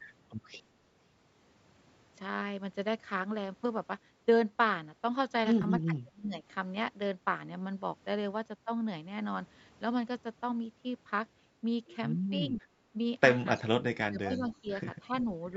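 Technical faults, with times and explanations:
5.62–5.65 s, AAC frame loss with concealment: about 20 ms of coded audio, which fits two lost 10 ms frames, never arrived, so the decoder filled the gap by rebuilding it from the last good spectrum. That guesswork leaves a brief smeared, noisy patch in the speech.
5.81–6.43 s, 12.51–12.66 s, 13.57–13.75 s, 14.08–14.45 s and 14.61–14.69 s, speech suppressed in double talk: the echo canceller most likely could not tell this talker's speech from returning loudspeaker sound while both sides spoke, so it turned the signal down. The speech dips by roughly 20 to 30 dB, fading or breaking into pieces.
13.57–13.63 s and 14.36–14.56 s, echo leak: the far end's echo canceller probably did not remove all of the loudspeaker sound its microphone picked up, so some was sent back. A faint copy of speech arrives 317 ms late, about 30 dB below the main speech, in short scraps.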